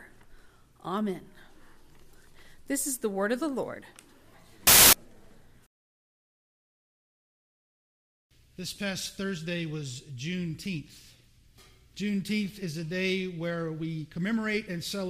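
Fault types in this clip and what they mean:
Wrong sample width: at 4.67 to 4.93 s, audio written as packed 24-bit integers is read as 32-bit integers, so the byte boundaries drift and values are assembled from bytes of neighbouring samples. Most values are garbage, and only some keep the true high-order bits, so this quarter-second bursts into loud noise with the original faintly audible underneath, running about 1.33 times too fast, with its pitch raised to match.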